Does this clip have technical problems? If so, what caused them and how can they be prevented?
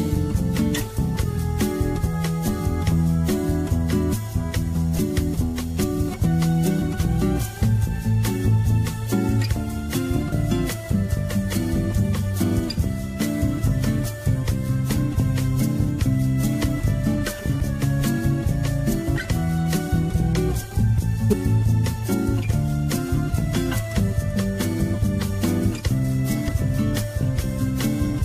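Yes. Compressed frames skipped at 10.31, 14.96, 17.60, 21.30 to 21.34 and 26.47 s. At each point whole encoded frames were never decoded, so the audio jumps ahead by roughly 70 ms (10.31, 17.60) or 150 ms (the others). Prevent it by checking file integrity after transfer and re-encoding from an intact source.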